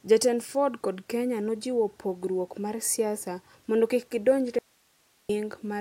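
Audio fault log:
4.59 to 5.29 s, audio dropout to a faint residue: the speech cuts out abruptly for about 0.71 s and the gap holds only hiss, roughly 40 dB below the signal. The abrupt edges rule out a pause or fade; the likely cause is a momentary signal loss while the downstream path stayed live.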